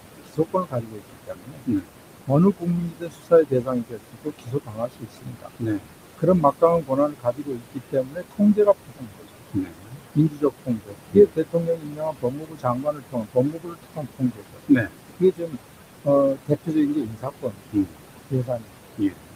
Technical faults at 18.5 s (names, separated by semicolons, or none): noise suppressor artifacts; speech cut by the noise suppressor